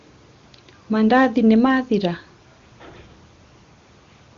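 Nothing stood out on listening to this speech, which carries the character of wideband HD Voice coding with no damage to speak of.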